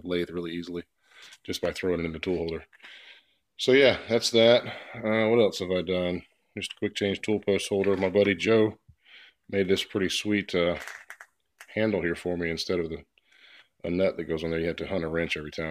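No technical faults can be heard anywhere in the audio.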